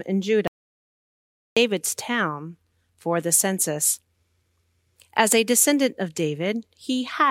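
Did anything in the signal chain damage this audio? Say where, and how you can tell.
Yes. At 0.47 s the speech cuts out mid-flow into dead silence, with no room tone, until 1.57 s, losing about 1.1 s. This audio dropout to silence likely came from the input device or link failing while the recorder kept writing silence.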